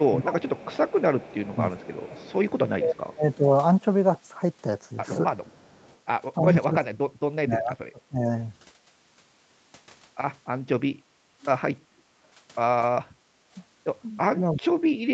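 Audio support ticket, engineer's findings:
Echo leak, 0.0–2.52 s and 5.43–5.98 s. Symptom: faint delayed copy of the far-end voice trailing 314 ms behind, about 25 dB under the speech at first, about 35 dB under later. Likely cause: far-end echo canceller not fully removing its loudspeaker pickup. Unlike room reverb, this is a discrete copy at a fixed 314 ms offset, not a smooth decaying tail.

Speech suppressed in double talk, 0.1–3.46 s, 6.38–8.28 s, 14.31 s to end. Symptom: talker's level collapses in pieces, deepest dips around 30, 35 and 40 dB, roughly a second in the first stretch and a second and a half in the second. Likely the echo canceller, unable to separate near talker from loudspeaker echo, attenuates both. Differs from background gating: the voice itself drops out, only while both sides talk.

Background gated by the echo canceller, 11.0–11.24 s and 13.19–13.43 s. Symptom: room sound dips about 14 dB, then about 11 dB, each for roughly 0.2 s, recovering as the canceller releases. 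Mechanism: microphone clamped hard while the loudspeaker plays. The ambient bed drops, briefly.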